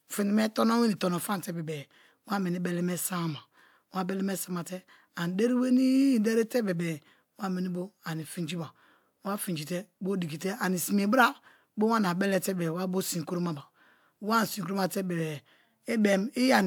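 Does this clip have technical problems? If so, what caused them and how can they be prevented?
No, this clip has no technical problems, so there is nothing to prevent.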